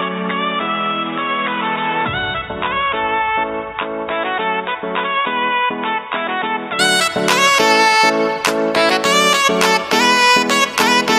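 From the start to 6.79 s the sound is dull and boxy, nothing above 3.8 kHz, somewhat quieter, with faint added hiss, likely an input switched to a poorer device.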